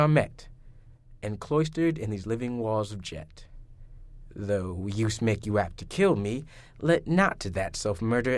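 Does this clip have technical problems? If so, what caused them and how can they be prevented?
No, this clip doesn't have technical problems, so there is nothing to prevent.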